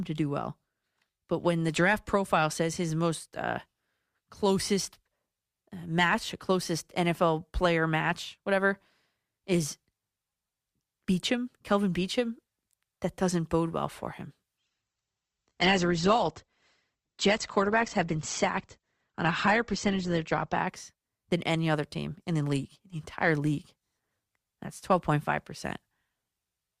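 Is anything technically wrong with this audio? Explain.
Yes. From 14.58 s to 20.58 s, just after "bode well for him", the speech switches to an adaptive stream at a lower bitrate. When the connection slowed, the player changed to a leaner encoding. Here the sound points to a drop from roughly 64 kbit/s Opus to about 16 kbit/s. Treble vanishes above 8.2 kHz, and coding artefacts thicken for six seconds. Packet loss would leave gaps or glitches. Here the quality instead changes abruptly at both ends with no break.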